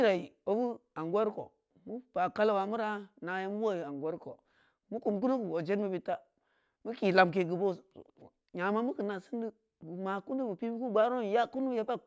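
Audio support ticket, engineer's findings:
Speech signal reviewed across its full duration with no technical fault detected anywhere in the recording or playback chain.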